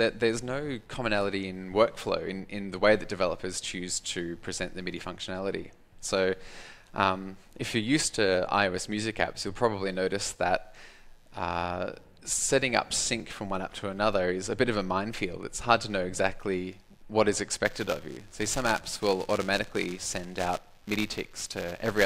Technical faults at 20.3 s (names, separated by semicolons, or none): computer activity noise; buffer tearing